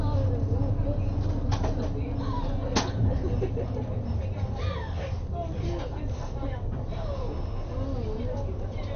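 Right through the clip the audio has that dull, gurgling, granular quality, with nothing above about 6.4 kHz. It points to MP2 compression, likely at a low rate around 48 kbps, where starved upper sub-bands get switched off and the bands that survive are coarsely quantised.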